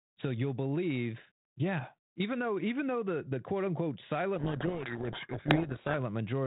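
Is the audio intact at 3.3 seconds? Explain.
Yes, at 3.3 seconds the audio is intact, with no fault at that moment.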